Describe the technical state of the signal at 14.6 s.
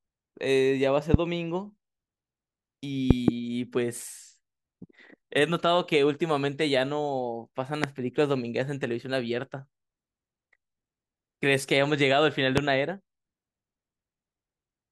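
At 14.6 s the speech signal is intact, with no audible fault at that moment.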